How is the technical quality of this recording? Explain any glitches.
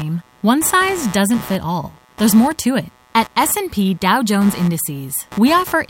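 The recording carries one continuous fault: computer activity noise, present from start to finish under the speech. It is a buzzy, chirping layer pulsing at around 150 Hz and sitting roughly 20 dB below the speech. The processor, graphics card or mouse draws changing current, and those swings disturb the ground shared with the audio input. Unlike steady mains hum, it flickers and shifts with the machine's workload rather than holding one fixed tone, and it ignores the rhythm of the speech.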